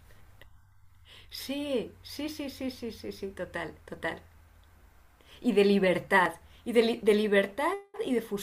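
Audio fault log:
6.26 s, dropped buffer (overrun): The speech makes a sudden jump forward. There is no gap of silence. The sound on each side meets directly, and a short stretch of roughly 40 ms is simply missing. The likely cause is that the software fell behind and the audio hardware overwrote a block of samples before they were read.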